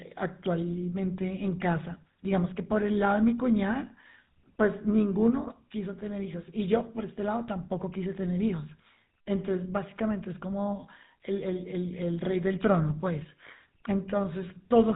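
From start to finish the speech sounds buzzy and gravelly, with nothing above 4 kHz: plainly audible GSM full-rate codec damage, which fits 13 kbps pulse-excited vocal-tract coding.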